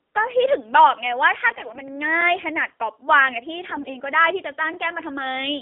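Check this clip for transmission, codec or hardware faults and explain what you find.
The clip carries two faults: narrowband mobile coding throughout, and two bursts of corrupted frames.

AMR narrowband mobile codec, throughout: the speech has been squeezed through a mobile speech coder that rebuilds the voice from a vocal-tract model excited by sparse pulses. The buzzy, synthetic edge fits a low mode around 7.4 kbps. The band runs only from about 250 Hz to 3.6 kHz, so the sound is thin and boxy with no air on top, and the coding damage is plainly audible.

AMR bit errors, 1.48 to 1.89 s and 3.68 to 3.98 s: on a poor radio link, the weakly protected bits in each frame arrived flipped while the checksum on the critical bits still passed, so the decoder trusted bad data. Excitation pulses land in the wrong places and the fine pitch, gain and spectral values drift. The voice holds roughly its pitch and loudness but turns hoarse, scratchy and gargling across both stretches, which points to a heavy error rate of roughly one bit in ten.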